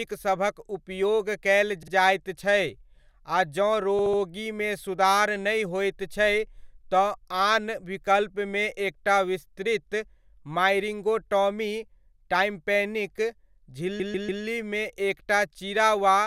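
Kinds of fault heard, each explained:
Repeated frames: a short stretch of the compressed speech is played again several times in a row, so the sound stutters and the clip grows longer. Here a 48 ms block plays twice more at 1.83 s, a 72 ms block three more times at 3.99 s, and a 144 ms block three more times at 13.99 s, adding about 0.74 s in all. Unlike an echo, the copies are exact and at full level rather than a fading tail.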